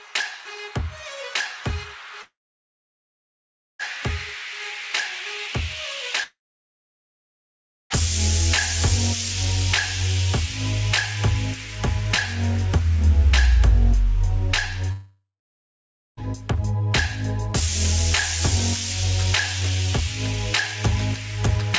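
Three long network dropouts occur, at 2.22–3.81 s, 6.23–7.92 s and 14.92–16.23 s. Each begins with a fading buzz or hiss and falls silent. The sound resumes with over a second lost, likely from packets never arriving.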